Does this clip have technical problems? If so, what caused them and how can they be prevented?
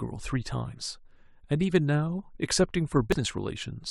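Yes. Brief glitches at 0.73 to 0.75 s and 3.12 to 3.14 s come from damaged data in a compressed stream: corrupted bytes make the decoder misread frames and lose sync. Protecting storage and transmission with checksums and error correction prevents this.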